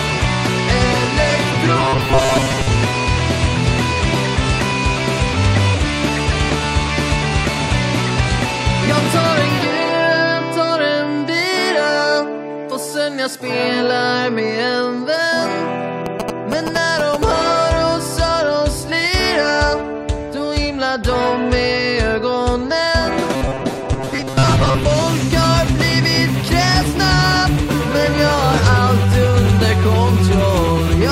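The audio has two faults. From 1.77 to 2.69 s and again from 23.34 to 24.83 s it turns into a rigid metallic buzz at 133 Hz: robotic sound from repeated short buffers. The likely cause is late-arriving audio, with each roughly 7.5 ms chunk played twice in place of about half the real material. A spectrogram would show evenly spaced horizontal harmonic lines at multiples of 133 Hz. The waveform would show short, identical repeating cycles. From 16.06 to 17.24 s, GSM signalling bursts break in as a galloping dit-dit-dit of short buzzes. This happens when a nearby 2G phone's radio pulses at 217 Hz are rectified by the audio circuitry, at a level only a little below the main sound. On a spectrogram these appear as vertical stripes with a 217 Hz harmonic comb. The waveform shows clusters of sharp, regular spikes.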